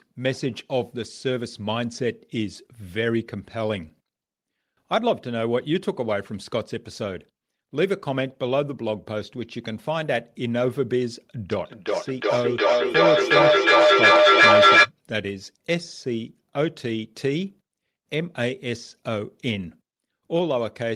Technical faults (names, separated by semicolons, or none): feedback echo between two devices